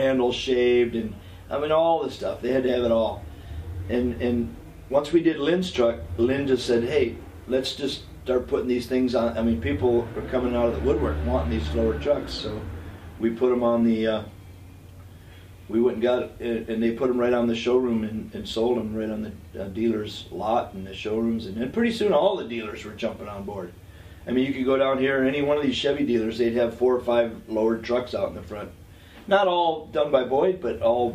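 No technical faults can be heard anywhere in the clip. Nothing in the audio breaks off, repeats or distorts at any point.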